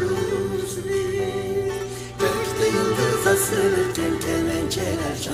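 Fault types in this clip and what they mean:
Mains hum: a steady low 60 Hz tone with some low harmonics sits under the sound throughout, clearly audible, where a ground loop or nearby transformer leaks power-line current into the signal.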